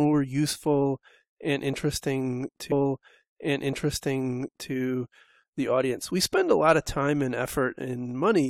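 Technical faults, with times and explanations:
2.71 to 4.70 s: stream segment repeated. The player queued the same stretch of speech twice, so about 2.0 s of the programme plays again. A small blip marks the jump back, where the audio restarts from an earlier point.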